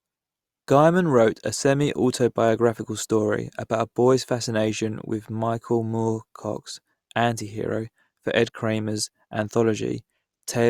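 No technical fault can be heard anywhere in the recording: the signal runs continuously without interruption, level disturbance or added noise.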